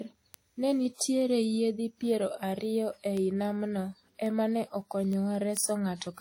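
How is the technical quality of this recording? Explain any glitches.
The recording has two clear technical problems: a band-limited lossy character across the whole speech clip, and a steady stream of ticks.

Transcoding between lossy codecs: From start to finish the speech has two different kinds of codec artefact layered over each other, and nothing above 16.6 kHz. The likely cause is a chain of two lossy encodes, consistent with Vorbis at around 65 kbit/s followed by WMA at around 48 kbit/s. The second encoder spent its limited bits re-coding the first one's artefacts while adding its own, and the lowest cut-off in the chain remains.

Word clock ticks: From about 0.13 s to 6.0 s there are sharp ticks of uneven strength, around thirty of them, at a regular interval of roughly 0.2 s. This points to a digital link read by a receiver running on its own clock, not locked to the sender, with the two clocks drifting apart by something like 100 parts per million. 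Each time they slip past each other, a single sample is dropped or repeated, leaving a tiny discontinuity.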